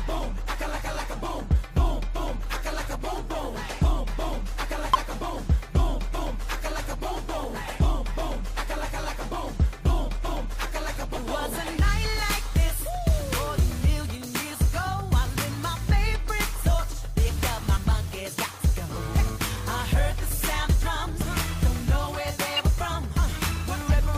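Whole compressed frames were lost or rejected by the decoder at 4.94 to 4.96 s, 17.75 s, 21.21 s and 23.88 s (compressed frames skipped), so the audio jumps ahead by about 100, 70, 100 and 50 ms respectively, each join heard as a brief blip or click. At 22.55 to 22.60 s, roughly three frames with flipped bits were decoded anyway (corrupt frame decoded), putting energy at wrong frequencies and producing a short burst of misplaced sound peaking around -15 dBFS.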